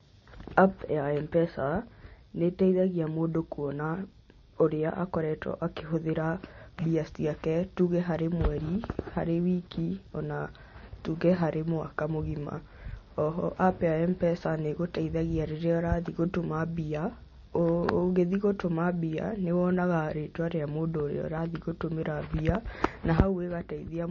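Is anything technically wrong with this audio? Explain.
Yes. Throughout the speech, nothing reaches above 7 kHz, and smeared, swirly artefacts overlap with a grainier, warbling layer. This is likely transcoding between lossy codecs, consistent with a low-rate MP3 re-encoded as Vorbis at a similar low rate. The second codec spends bits reproducing the first one's damage and adds its own. A spectrogram shows a hard ceiling at 7 kHz and patchy, flickering high bands.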